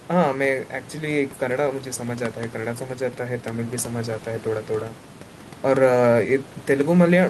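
No technical faults can be heard in this recording.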